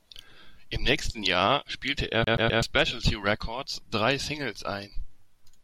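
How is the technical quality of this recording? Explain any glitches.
The recording has one clear glitch. A CD stuck on one turn, from 2.24 to 2.62 s, right after "spielte er". A scratch knocks the laser back one track at the same point each revolution, so the player keeps rereading the same slice of disc. Here a segment of about 0.13 s repeats three times, each pass broken by a brief mute at the jump, giving the quick, evenly spaced stutter of a skipping CD before the speech moves on.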